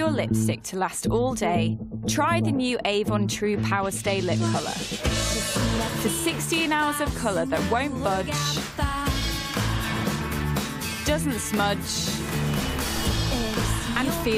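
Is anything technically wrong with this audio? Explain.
No, nothing technically wrong turns up anywhere in this one, so there's nothing here to flag.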